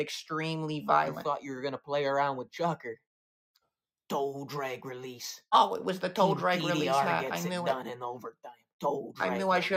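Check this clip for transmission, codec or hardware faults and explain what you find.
One fault turns up, near the end of the clip. Sound cut by the noise suppressor, 8.32 to 8.82 s: the suppressor mistook the sound for background noise and pulled it down by up to about 22 dB. For roughly a third of a second the sound sinks in level.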